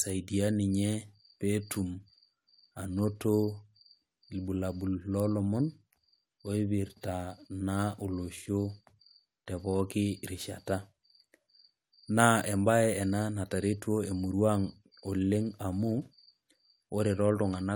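No technical faults can be heard anywhere in this speech recording.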